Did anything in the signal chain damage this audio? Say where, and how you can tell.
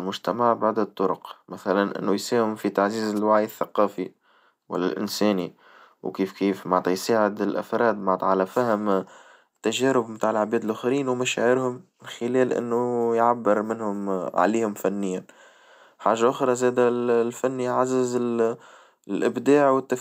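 Yes, there's a wireless microphone noise hit on the radio link, upstream of the converter. It's a brief swish of static from 3.15 to 3.19 s, right after "إنه يساهم في تعزيز" and before "الثقافي والإنساني وكيف كيف". That's the FM signal dropping into a short fade as reflections cancel it. The receiver's noise floor jumps up for about 40 ms, then clears once the carrier recovers.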